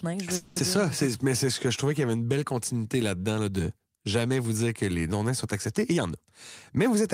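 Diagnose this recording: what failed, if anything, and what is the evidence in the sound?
Network and jitter buffer, call audio freeze: from 0.35 to 0.58 s the sound stalls. The last moment is carried on as a fading buzz or hiss for 210 ms, and then the speech resumes where it stopped with nothing lost. Delayed packets likely drained the buffer, adding 210 ms of delay.

Jitter buffer speed-up: between 5.92 and 6.27 s the speech runs at 131% speed with unchanged pitch and sounds hurried. The buffer held excess audio and trimmed it by repeatedly cutting short pitch-period pieces, about a tenth of a second in total.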